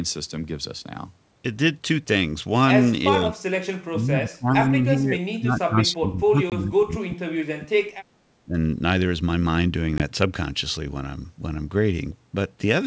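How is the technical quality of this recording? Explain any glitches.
The recording has two kinds of fault: the talker gets ducked for a few stretches, and there are two short dropouts. The wideband G.722 sound itself is clean up to about 7 kHz.

The speech suppressed in double talk runs from 3.11 to 7.91 s. The level sags by up to about 30 dB over roughly four seconds, then dips again briefly at 8.09–8.28 s (about 20 dB) and 8.47–8.55 s (about 10 dB). This is likely the echo canceller mistaking the far side's overlap for echo and pulling this talker down along with it.

The packet loss on an ADPCM call hits at 6.50 s and again at 10.0 s. Each one cuts a hard-edged 20 ms hole, which fits a single lost packet. After the gap the decoder's predictor and step size are out of sync with the sender's, so the sound comes back with a brief click or roughness before settling.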